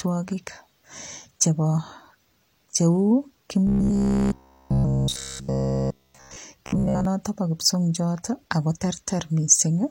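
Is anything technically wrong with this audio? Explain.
Yes, there's robotic sound from repeated short buffers, from 3.67 to 6.37 s, all of it, and 6.66 to 7.05 s, mostly, just before "po kipsongiot". It's a rigid 66.7 Hz buzz, likely from about 15 ms chunks looping while real audio is dropped.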